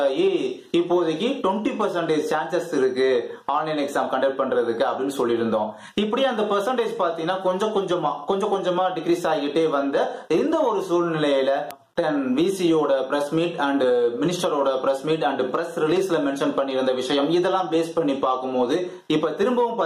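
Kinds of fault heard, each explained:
Gain pumping: throughout, the gain swings by about 10 dB, pulled down on loud sounds, likely excessive gain hitting a fast limiter.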